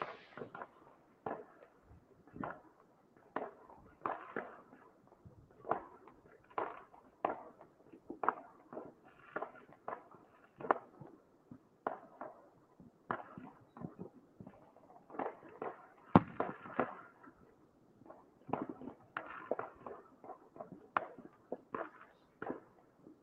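Across the whole recording the level pumps and breathes: sustained parts of these everyday sounds sag, tails are clipped away, and sharp onsets punch through, so the overall loudness swings by something like 15 dB. This is a noise suppressor applied to music or sounds. A suppressor tuned for speech reads steady energy and decays as background noise and keeps pulling them down, letting only transients through intact.

The suppressor cuts sound hardest between 0.73 and 3.29 s, between 7.08 and 15.09 s, between 17.49 and 19.16 s, and from 21.34 s to the end. In each stretch, held or fading material drops by up to about 6 dB and its decay is truncated. The dips add up to roughly a second in the first stretch, about two seconds in the second, and a little under a second in the third. The suppressor mistook these sustained portions for noise and attenuated them more than the surrounding audio. 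Underneath, the high end stops near 12 kHz, which points to an Opus call path at around 40 kbps.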